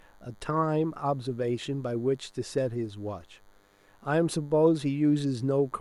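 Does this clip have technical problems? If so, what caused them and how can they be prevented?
Yes. A DECT cordless phone buzz runs throughout, a thin 100 Hz buzz with dense harmonics, roughly 40 dB below the speech. The audio circuitry is rectifying the handset or base station's radio bursts every 10 ms. Prevent it by moving DECT equipment away from the recording chain and using shielded, properly grounded cables.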